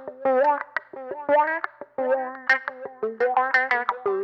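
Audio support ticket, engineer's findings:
No audible faults found.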